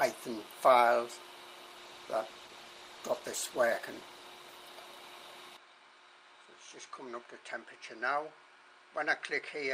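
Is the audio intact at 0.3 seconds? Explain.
Yes, at 0.3 seconds the audio is intact, with no dropout, click, distortion or other fault audible at that moment.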